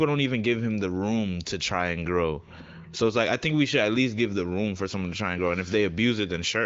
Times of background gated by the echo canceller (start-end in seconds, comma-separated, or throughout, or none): none